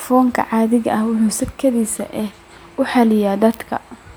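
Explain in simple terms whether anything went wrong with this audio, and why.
Nothing went wrong here, as far as a listener can tell: the speech comes across as one steady recording, with no technical problems to point to anywhere along the way.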